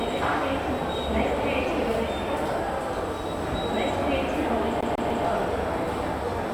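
From 4.81 to 5.25 s the player gets a CD stuck on one turn: a scratch keeps knocking the laser back a track, so a 0.15 s slice of sound repeats three times, each jump marked by a brief mute, giving a quick, even, mechanical stutter.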